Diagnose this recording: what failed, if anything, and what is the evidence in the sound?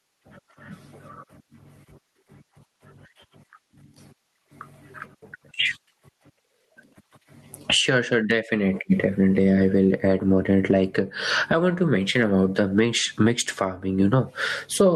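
Gain pumping runs through the whole speech clip: the level swings by something like 15 dB as the gain is pulled down on each loud moment, so everything sounds squashed and level. Likely cause is input gain set far too hot, with a fast limiter clamping each loud moment.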